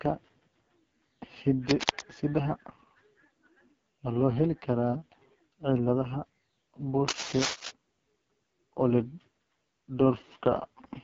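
From the start, the whole clip carries the sound of the AMR wideband (HD Voice) codec working at its bottom rate. The speech is rough and raspy, and its fine detail is smeared into a buzzy, gravelly texture. That points to something like 6.6 kbit/s, where the pulse-driven vocal tract model has too few bits to follow the voice. On a spectrogram, the energy stops sharply near 7.3 kHz, and the harmonics look blotchy and coarse throughout.

From 7.08 to 7.71 s a cable scratch noise cuts across the speech. It is a dense, uneven scraping and rustling, roughly as loud as the speech itself, lasting just over half a second. The likely cause is a worn cable or connector being moved, so that its contact resistance jumps around rapidly. The waveform shows a cluster of jagged, irregular spikes over that span. On the spectrogram, the same stretch appears as a broadband smear of ragged vertical streaks laid over the speech.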